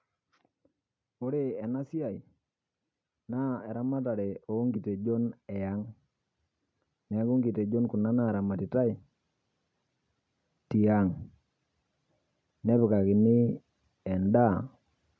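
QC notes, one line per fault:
3.26–5.83 s, automatic gain rising: the speech and the background behind it swell together by about 5 dB over two and a half seconds, as the automatic gain control judged the input too quiet and eased its gain upward gradually.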